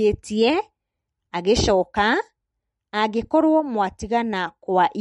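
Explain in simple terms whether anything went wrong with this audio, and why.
Yes: the speech sounds watery and swirly from start to finish, with nothing above about 11 kHz, likely from MP3 compression. Unlike a plain treble cut, which only dulls the sound, the faint detail here flickers on and off moment to moment.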